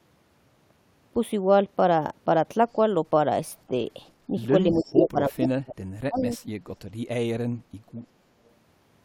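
At 4.71 s a short echo leak appears, lasting until 4.85 s: a faint copy of the speech returns 310 ms late, about 20 dB below the direct signal. The likely cause is a far-end loudspeaker path whose echo canceller let part of the microphone pickup through and sent it back. Further leaked scraps with the same 310 ms delay follow at 5.40 to 5.48 s, where the echo is strong at only about 5 dB down, at 6.17 to 6.36 s, about 25 dB down, and at 8.01 to 8.07 s, again about 25 dB down.

Overlapping these, from 4.72 s to 6.39 s, the speech is suppressed in double talk. The level dips and breaks up in pieces, totalling roughly one and a half seconds, with the deepest drops around 35 dB. The likely mechanism is the echo canceller failing to tell the local talker apart from loudspeaker echo while both sides were active, so it attenuated everything.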